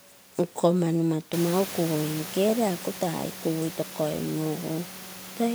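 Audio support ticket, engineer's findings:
No faults found in recording.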